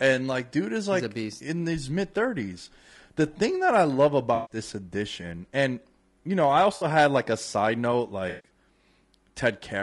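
Low-delay AAC compression runs through the whole speech clip. The voice has a rough, grainy texture with noise filling the gaps between pitch harmonics. This is likely from a low-delay codec such as AAC-ELD, whose short frames resolve harmonics poorly and fit a bitrate near 32 kbps.

AAC frame loss with concealment strikes at 4.35 to 4.57 s, 6.75 to 6.85 s and 8.29 to 8.50 s, gaps of 140 ms, 60 ms and 140 ms. The decoder patches each gap from the last good spectrum, leaving smeared, noisy, phasey stretches.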